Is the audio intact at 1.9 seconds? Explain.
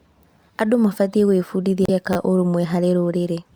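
No. From 1.85 to 1.90 s the speech is hit by damaged data in a compressed stream: corrupted bytes make the decoder misread frames and lose sync until it finds the next header. It sounds like a brief chirp, squawk, click or short hole.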